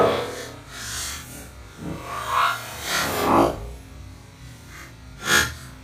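Nothing is technically wrong with the clip.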